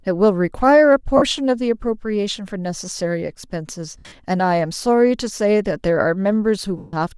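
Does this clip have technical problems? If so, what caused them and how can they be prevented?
Yes. Bluetooth LC3 compression runs through the whole speech clip, heard as a breathy, grainy edge on the upper spectrum where high-frequency detail has been discarded and replaced with noise. This is likely a Bluetooth LE Audio link, with the damage fitting a moderate bitrate around 48 kbps. A higher LC3 bitrate or a wired connection would prevent it.

Lost LE Audio frames occur at 1.17 to 1.23 s, 3.98 to 4.12 s, and 6.78 to 6.94 s. At each gap the decoder repeats the last spectrum with scrambled phase, so the speech smears into noise and then fades. The middle gap is scattered, with one run of about 70 ms. The last gap is longest, about 150 ms. Moving the transmitter closer, clearing obstructions and reducing 2.4 GHz interference would prevent these dropouts.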